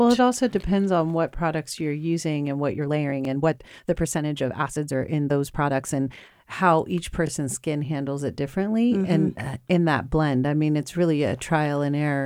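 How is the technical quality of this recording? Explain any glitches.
The recording has two distinct glitches: one stretch of sped-up speech and a set of short, regularly spaced stutters.

From 2.72 to 6.32 s, between "products you're using and" and "how each", is a time-stretched section. The speech runs about 1.37 times faster with unchanged pitch, likely from software squeezing it by dropping short pieces. It sounds rushed. A simple playback speed-up would have raised the pitch instead.

At 3.25–3.27, 7.27–7.30 (just after "how each", before "skin handles it differently") and 11.30–11.32 s come overlapping chunks. Each chunk starts about 21 ms before the previous one ended, so that slice plays twice, giving a click-stutter. The regular 4.0 s spacing separates these from random dropouts.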